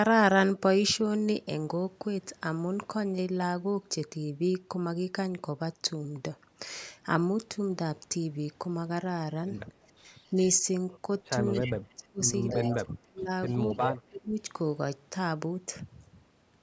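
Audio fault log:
9.97 to 14.38 s, speech suppressed in double talk: the echo canceller likely could not separate this talker from the far side and attenuated both, so the speech dips at 9.97, 11.59 to 12.21, 12.52 to 13.3 and 13.52 to 14.38 s, by about 15, 35, 30 and 20 dB.
10.24 to 13.99 s, echo leak: a loudspeaker echo likely slipped past cancellation and returned 285 ms late, heard as delayed copies at 10.24 to 10.49, 11.52 to 11.73, 12.7 to 12.77 and 13.48 to 13.99 s, about 10 to 30 dB below the speech.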